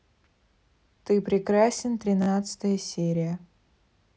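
At 0.38 s the speech catches on a repeated buffer: one 16 ms slice plays a second time, giving a brief click as the hard joins meet. From 2.22 to 2.27 s a 16 ms slice plays three extra times, a short buzzy stutter. The playback ran dry and reused its last block, which fits a 256-sample buffer. Unlike a dropout, there is no silent gap and essentially nothing is lost; the same piece simply sounds again.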